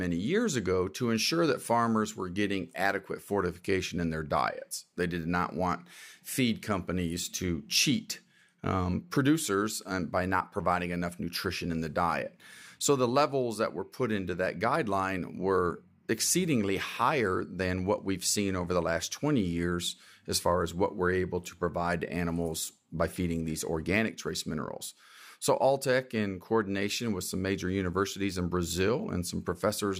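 Nothing stood out as a technical fault on listening to this speech recording.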